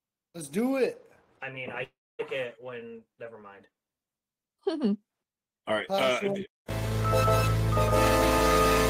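From 1.83 to 2.21 s the sound smears into a fading buzz that sinks into silence, then resumes with roughly 0.36 s missing. This long network dropout, likely a stall in packet delivery, differs from a brief packet-loss click by its audible decay and skipped content.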